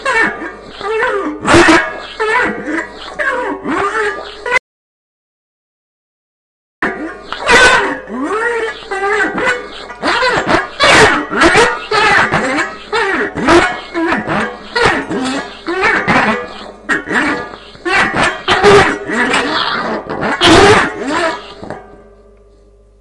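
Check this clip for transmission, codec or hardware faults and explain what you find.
There is one fault, an audio dropout to silence. From 4.58 s to 6.82 s the sound cuts out mid-flow and about 2.25 s of it is lost. The likely cause is a briefly lost input, with the recorder writing silence until the signal returned. The gap is dead silence with no room tone, shown as a flat line on the waveform and a blank vertical band on the spectrogram.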